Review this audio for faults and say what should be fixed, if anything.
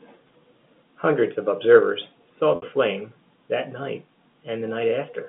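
Packet loss with pitch repetition hits from 2.56 to 2.62 s: about 60 ms went missing, fitting three 20 ms packets, and the receiver looped the last pitch period, giving a brief buzzy hold that fades before the speech returns. A jitter buffer with a bit more headroom, or forward error correction on the link, should cover those lost packets.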